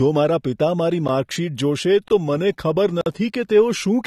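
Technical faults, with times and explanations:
Throughout, AAC compression: the sound is dull and smeared, with fizzy sibilants. A spectrogram shows a hard ceiling at 13.3 kHz, likely low-bitrate AAC-LC coding around 32 kbps.
2.08–2.10 s and 3.01–3.06 s, block of digital silence: the sound cuts abruptly to silence for 21 ms, which fits a 1,024-sample buffer, then for 51 ms. Each gap appears as a flat line in the waveform.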